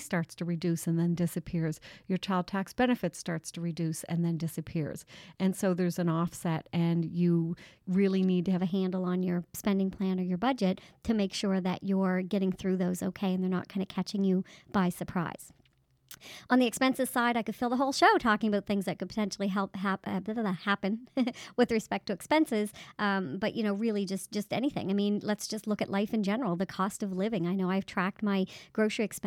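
The audio has a section at the wrong speed. From 8.58 s to the end, playback runs 1.12 times too fast. Pitch rises by about two semitones and everything sounds hurried. The likely cause is this stretch being clocked at the wrong rate.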